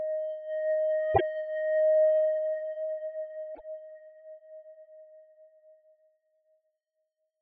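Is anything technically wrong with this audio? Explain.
Yes, two spots of damaged data in a compressed stream, at 1.11 to 1.21 s and 3.52 to 3.61 s. Corrupted bytes throw the decoder off sync, so you get a brief chirp or squawk.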